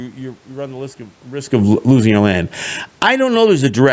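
Right after "risk of risk of", at 1.68 s, automatic gain falling kicks in. The control judges the input too loud and eases it down about 6 dB by 2.15 s, so speech and room noise sink together. Then automatic gain rising from 2.14 to 2.65 s pushes it back up about 6 dB, and the background swells right along with the speech. From 2.87 s to the end the gain falls again, much harder this time, about 17 dB, and the tail fades away.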